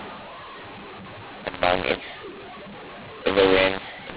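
From start to finish, the speech carries a mu-law and A-law mix-up: samples written with the mu-law curve are expanded with the A-law curve. The two logarithmic scales disagree, so levels are scrambled. Some come out too loud, others too soft, and the quietest samples are lifted well clear of silence. Speech is harsh and gritty, and pauses fill with hiss. The band stops near 4 kHz, which fits ordinary 8 kHz G.711 telephone coding.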